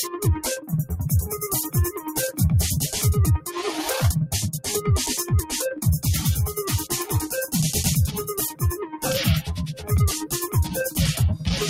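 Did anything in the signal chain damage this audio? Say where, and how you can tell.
Yes. The whole clip pumps and flutters, its level swinging by around 10 dB as sustained parts sink and attacks punch through. That points to the call-processing stage: a noise suppressor meant for speech left active on non-speech sound, treating steady tones and tails as noise.

Sound cut by the noise suppressor is clearest at 0.56–0.71 s, 1.94–2.12 s, 3.38–3.53 s, 8.83–9.05 s and 9.74–9.91 s. In each, steady or decaying sound abruptly hollows out, dropping up to about 11 dB, because the suppressor classified it as noise and attenuated it.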